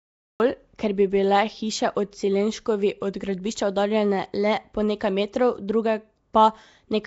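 A speech recording with a rough, hissy halo and a smeared, underwater quality runs the whole way through, with nothing above about 7.7 kHz. The likely cause is Nellymoser compression, the Flash-era Nellymoser Asao codec, at a rate consistent with about 32 kbps. It codes short fixed blocks with very few bits, so weaker frequency bands get no real signal and are filled with noise. That noise fill produces the hiss, and the coarse block coding blurs the sound. The opening is a cut-off start. From 0.0 to 0.4 s there is only digital silence, and then the speech begins abruptly in the middle of a sound, with no natural attack or fade-in. The recording or stream began late and caught the sound already underway, so the first moment is chopped rather than building up. At 0.78 s there is pre-echo, a short hiss about 10 ms ahead of a sharp attack, which sounds softened as a result. A transform codec spreads its quantisation noise evenly across a whole block. 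When a sudden onset lands late in a block, noise sized for the loud part also fills the quiet instant before it, and the hiss arrives slightly before the attack itself.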